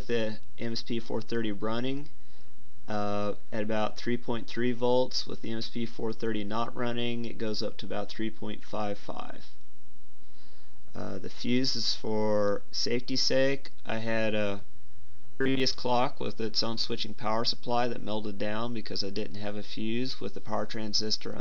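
Robotic sound from repeated short buffers appears from 15.17 to 15.60 s, where the audio collapses into a rigid, metallic buzz pitched at 134 Hz that only loosely keeps the shape of what surrounds it. The likely cause is a playback chain starved of fresh data, looping a fragment of about 7.5 ms over and over. That repetition rate sets the fixed buzz pitch, and for most of that stretch the genuine audio is simply skipped.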